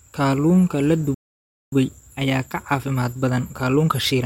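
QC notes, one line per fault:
1.14–1.72 s, playback stall: the speech halts mid-flow and the output drops to silence for about 0.58 s, then resumes. The cause is likely the player running out of buffered data or its audio thread being blocked. Unlike a dropout or gated gap, the silence is long, and the sound restarts in continuity with where it stopped rather than skipping material.
1.72–4.26 s, time-compressed catch-up: from the moment the stall ends to the end of the clip, the speech runs about 1.15 times faster to work off the backlog. Small pieces are cut out and cross-faded together, so delivery sounds hurried while pitch stays normal. That unchanged pitch separates it from a sample-rate or clock mismatch, which would raise pitch along with speed.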